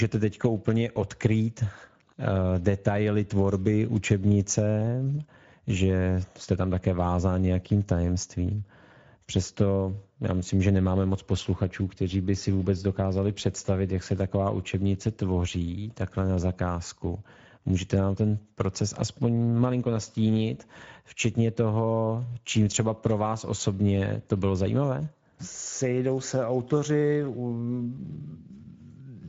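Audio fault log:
throughout: Speex codec. The speech carries a plainly audible hoarse, noisy grain, as the CELP coder runs short of bits to model the excitation. Nothing is present above 7.7 kHz, and the damage points to a wideband mode around 16.8 kbps.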